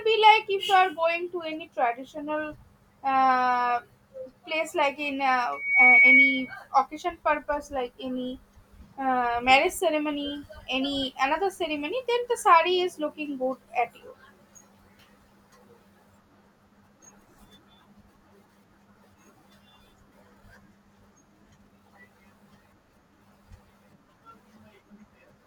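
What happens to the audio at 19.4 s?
At 19.4 s the speech plays through intact, with no dropout, click, distortion or other technical fault.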